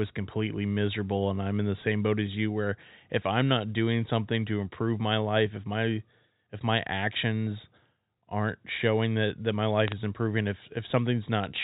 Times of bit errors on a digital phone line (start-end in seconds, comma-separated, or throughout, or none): 9.88-9.92